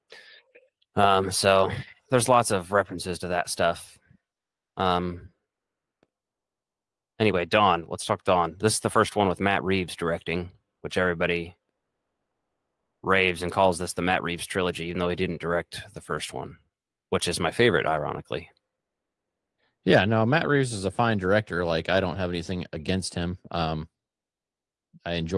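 No technical faults can be heard anywhere in this audio.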